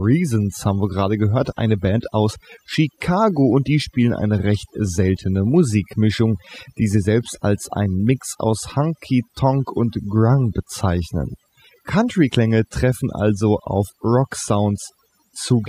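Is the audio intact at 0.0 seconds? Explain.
No. From the very start and throughout, the background drops to near silence dotted with twinkling specks. This is overdone noise removal: an over-aggressive noise reducer is switching off individual frequency bands near its noise estimate, taking quiet parts of the speech with them.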